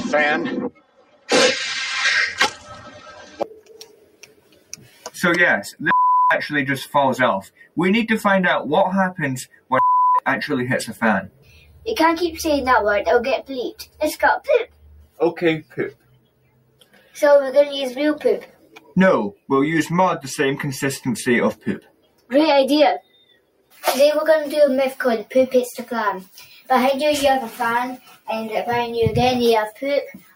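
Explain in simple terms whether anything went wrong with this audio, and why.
Throughout, the sound keeps swelling and sinking, with lingering parts fading unnaturally. A noise suppressor meant for speech was left on the sound and treats steady tones as noise.

Sustained passages drop noticeably at 0.7–5.8 s, 7.44–7.77 s, 9.46–11.87 s, 13.79–19.5 s, 21.55–23.83 s and from 26.25 s to the end. This is sound cut by the noise suppressor, which mistook it for noise.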